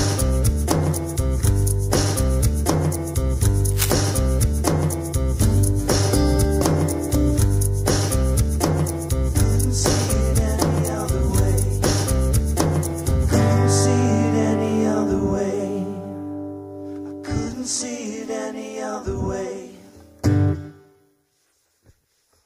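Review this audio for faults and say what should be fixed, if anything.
There's a burst of cable scratch noise from 3.71 to 3.91 s, a dense, uneven rustle sitting only a little below the main sound. That's most likely a worn lead or connector being moved, its contact resistance jumping around. Swapping out or reseating that cable and keeping it still during takes should stop it.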